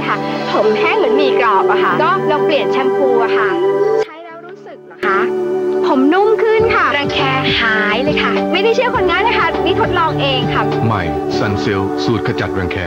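From 4.03 to 5.03 s the sound falls by about 20 dB and turns faint, its centre nearly gone. This is likely one channel inverted, so shared content cancels in mono. A plain gain drop would leave a quieter full copy, not this residue.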